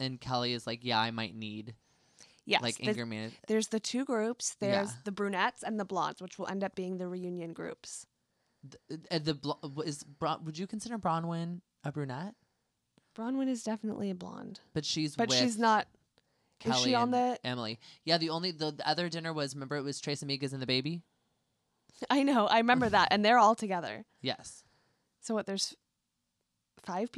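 No technical faults can be heard anywhere in this speech recording; the signal stays continuous and steady throughout.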